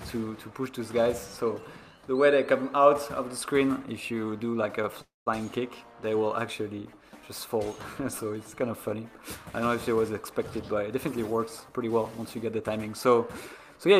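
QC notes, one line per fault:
5.01–5.28 s, call audio freeze: the sound stops dead and what fills the gap is a short smeared tail of the last bit that fades out, then roughly 170 ms of near-silence before things pick up exactly where they left off. Nothing is lost, but about 250 ms of extra delay gets wedged in. Sounds like packets stalled in transit and the jitter buffer ran dry, most likely, with the receiver stretching the last sound until the audio caught up.
10.47–12.79 s, jitter buffer speed-up: over these couple of seconds the audio runs at about 111% speed while the pitch stays put, so it comes across as rushed rather than chipmunky. That's the receiver working off a backlog of buffered audio, snipping out tiny pitch-period-sized slices again and again until around a third of a second is gone and the delay is back near its target.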